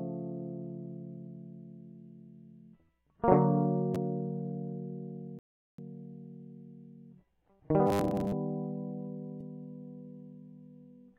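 A rebuffering stall at 5.39 to 5.78 s drops the music to silence, then resumes exactly where it stopped, adding about 0.39 s without losing anything.

Robotic sound from repeated short buffers at 7.87 to 8.32 s turns the music into a rigid metallic 100 Hz buzz, likely from 10 ms chunks repeating while about half the real audio is skipped.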